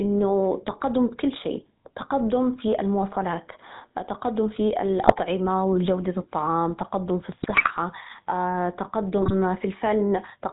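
Throughout the speech, the GSM full-rate codec rebuilds the voice from a vocal-tract model driven by sparse, regularly spaced pulses and drops everything above 4 kHz. The result is a dull band-limited sound with a clearly audible buzzy, gravelly roughness, which fits the 13 kbps full-rate coder.

GSM bit errors then corrupt the decoder's filter, pitch and gain values. This happens from 5.0 to 5.21 s, between "في المواصلات تقدم في" and "وجودة الطعام تقدم في", again from 7.42 to 7.71 s after "وجودة الطعام تقدم في", and briefly from 9.22 to 9.34 s. Each burst breaks into squawks, pops and gargling.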